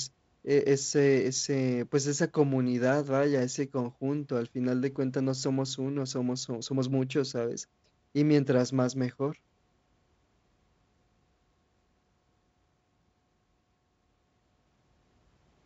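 Speech over G.722 wideband telephone coding, content stopping near 7.7 kHz and a faintly noisier lower band that points to the 48 kbit/s mode, with no technical faults to report.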